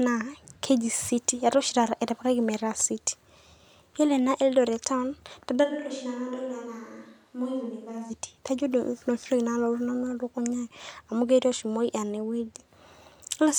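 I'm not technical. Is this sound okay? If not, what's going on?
No. From 5.66 to 8.09 s the recording likely switches to a distant microphone, a microphone further from the speaker, because the close one dropped out. The voice suddenly turns hollow, roomy and thinner, gets noticeably quieter with more background noise, then snaps back.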